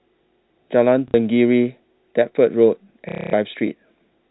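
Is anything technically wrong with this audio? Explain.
Yes. There is packet loss with the last packet repeated, at 1.08 to 1.14 s (60 ms) and again at 3.09 to 3.33 s (240 ms). The receiver got no new packets and replayed the last one until fresh audio came. The repeats fall out of step with the pitch. The longer gap becomes a robotic buzz near 33 Hz, which fits 30 ms packets. The first gap is a brief stutter.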